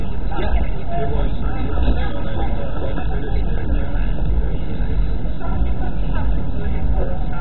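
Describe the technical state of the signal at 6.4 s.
MP2 compression at 6.4 s, present throughout the clip: the audio is likely heavily compressed with MPEG Layer II at a very low bitrate, around 16 kbps. Starved of bits, the upper sub-bands shut off, leaving nothing above about 4.1 kHz, and the remaining bands are coarsely quantised, giving a dull, gurgling, granular sound.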